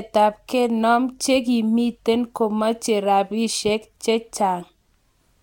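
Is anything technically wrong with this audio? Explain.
No, no technical faults heard.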